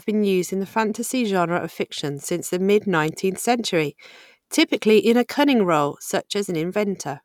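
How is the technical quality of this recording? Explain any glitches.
No technical faults can be heard anywhere in this speech recording. There are no glitches to explain.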